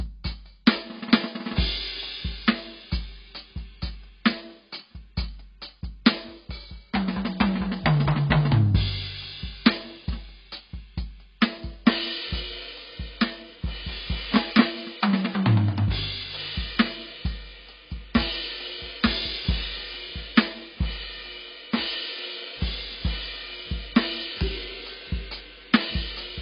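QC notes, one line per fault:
Throughout, AAC compression: the music has nothing above 5.1 kHz, so it sounds dull and boxed-in, and sustained notes smear and warble. Damage this heavy points to a very low bitrate, around 16 kbps, likely from an AAC-LC encoder discarding spectrum.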